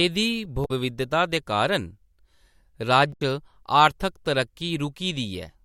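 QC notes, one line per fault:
0.62–0.71 s and 3.10–3.21 s: damaged data in a compressed stream. Two short decoding glitches break through the speech, each about a tenth of a second. Corrupted bytes make the decoder misread frames and lose sync until it finds the next frame header.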